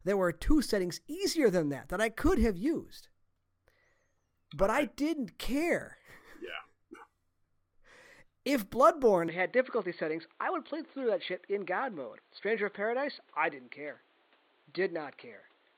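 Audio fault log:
9.28–15.78 s: input switched to a poorer device. The speech abruptly turns dull and boxy, with nothing above 4.5 kHz, no gap and little level change, plus a faint new noise floor far below it, likely from a narrower-band microphone or headset profile.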